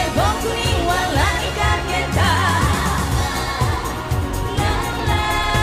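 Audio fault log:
4.18–5.56 s, periodic USB or driver dropouts: a run of about twenty evenly spaced ticks, one every 63 ms (roughly 16 per second). Something on the USB bus or in the audio driver stalls the stream at a fixed interval, and each time around a millisecond of samples is skipped outright rather than filled with silence. The waveform jumps straight across each gap, and that discontinuity produces a small click wherever sound is present.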